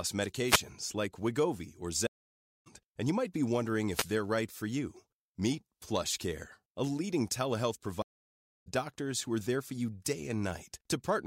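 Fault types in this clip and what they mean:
Wireless microphone noise hit: the radio link from an analogue FM microphone faded as reflected signals cancelled each other, so the receiver's own noise rose over the speech. Here it comes through as two brief swishes of static, at 0.47 to 0.59 s and at 3.91 to 4.06 s, each lasting little more than a tenth of a second.
Stream reconnect: the network connection dropped, the player stopped, then reconnected and started decoding again from a later point in the live stream. The audio cuts to silence for about 0.59 s starting at 2.07 s, and for about 0.64 s starting at 8.02 s. Each time the speech picks up roughly 0.4 s further on than where it stopped, so a short stretch is skipped outright.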